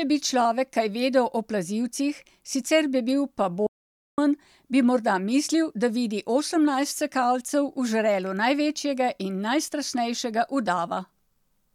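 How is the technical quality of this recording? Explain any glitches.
The recording has one clear glitch. From 3.66 to 4.18 s there is a playback stall: the speech cuts to silence for about 0.51 s, likely because the player ran short of data, then resumes.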